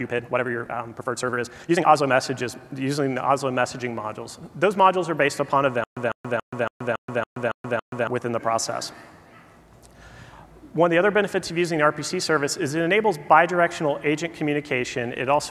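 From 0.00 to 2.08 s there is a time-stretched section. The sound runs about 1.61 times too fast, yet the pitch holds steady. It feels rushed. Software likely squeezed this part by dropping short pieces to fit a length.

From 5.84 to 8.07 s comes a stutter with silent gaps. A 151 ms burst repeats eight times, each followed by 128 ms of digital silence, every 279 ms. The stream likely stalled and replayed its last fragment. The missing audio is gone.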